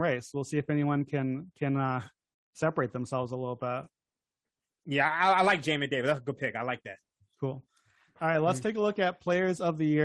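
No technical faults can be heard anywhere in this speech recording.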